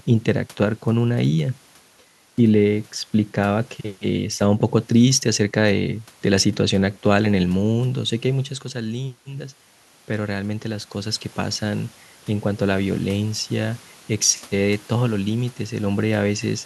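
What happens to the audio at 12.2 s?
At 12.2 s you're in the middle of a stretch of pre-emphasis left on, running from about 3.65 s right to the end. The treble boost from the standard CD 50/15 µs curve was applied but never undone on playback, so highs sit about 8 dB hotter at 10 kHz than at 1 kHz. The speech comes across thin and overly bright, with sibilants hissing more than they should.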